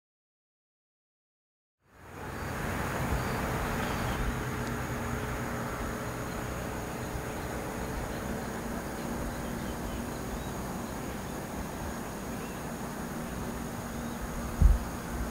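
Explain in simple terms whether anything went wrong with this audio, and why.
Nothing went wrong with this audio. The sound fades in smoothly over about one second, beginning around 2 s and reaching full level at 2.99 s, the way an editor would ease it in, with no click or sudden jump.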